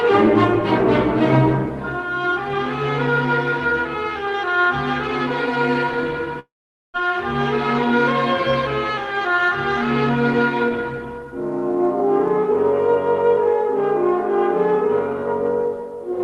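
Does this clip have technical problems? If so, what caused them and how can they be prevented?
Yes. Between 6.39 and 6.96 s there is a long network dropout, likely caused by packets failing to arrive for over half a second. The receiver stretches the last sound into a fading buzz that decays to near silence. When audio returns, about 400 ms of material is missing and the playout timing has shifted by around 150 ms. To prevent this, stabilise the network link and enable Opus forward error correction with adequate jitter-buffer headroom.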